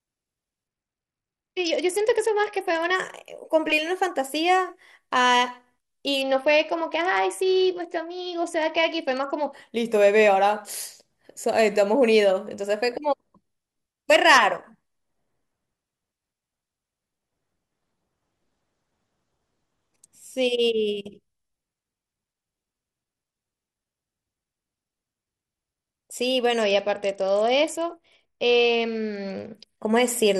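At 0.68 to 2.95 s, 6.21 to 9.53 s and 26.61 to 29.77 s the speech goes dull and gritty: a Bluetooth SBC bit pool drop, with the link starving the top sub-bands and coarsely quantising the rest, consistent with the bit pool falling from 31 to around 9, roughly 72 kbps.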